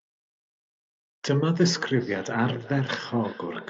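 From 1.58 s to the end of the clip, the speech has a feedback echo between two devices. A second device in the same room is playing this call back out, and the microphone picks it up again. Each canceller removes only its own playback, so the sound returns about every 0.4 s, reaching about 18 dB below the direct speech. Each pass sounds thinner and more ringing, bounded above by the call path's 8 kHz bandwidth.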